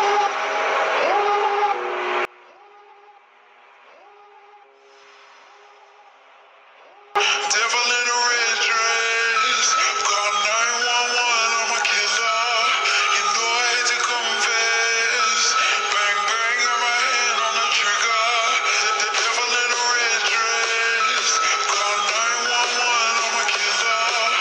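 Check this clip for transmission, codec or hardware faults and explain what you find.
One fault is present. From 2.25 to 7.16 s the sound falls by about 28 dB, leaving only a faint copy. The likely cause is one channel inverted, which cancels shared content when the channels are summed to mono.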